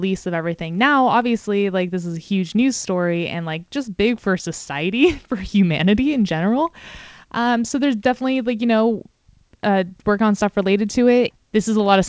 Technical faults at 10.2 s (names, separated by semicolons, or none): none